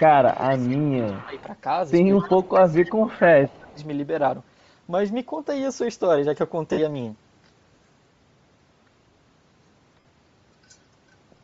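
Right from the start the whole clip has that breathy, grainy top end you get when the upper spectrum is thrown away and filled back in with noise. It's likely Bluetooth LC3 compression at a fairly low rate, something that fits roughly 32 kbps with short 7.5 ms frames. The codec damage is plainly audible on every stretch of speech, with a hissy shimmer where the crisp consonant detail should be.

The first second is busy. From 0.00 to 0.81 s the speech sags by up to about 20 dB, and from 0.52 to 1.41 s a faint copy trails it, 234 ms late and about 25 dB down. Then from 0.99 to 1.39 s the speech dips again by about 15 dB. That combination likely points to speech suppressed in double talk, with the canceller ducking the near talker while the far side is also active. The trailing copy is likely an echo leak from a loudspeaker on the other end that the echo canceller didn't fully remove.

The same thing repeats a little later. 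An echo leak runs from 2.17 to 3.24 s, this time louder at about 20 dB under the speech and again 234 ms behind. It overlaps a suppression dip of about 10 dB from 2.24 to 2.96 s. Another dip follows from 3.27 to 3.80 s at about 15 dB, with one tiny scrap of echo at about 35 dB down between 3.62 and 3.67 s.

Later there are two short dropouts from lost LE Audio frames, one at 6.72 to 6.79 s and one at 9.99 to 10.05 s. Each is a gap of 52.5 ms, which fits a run of seven 7.5 ms frames going missing over the Bluetooth link. The decoder papers over each gap by recycling the last spectrum with scrambled phase, so instead of a clean hole you hear a brief noisy smear.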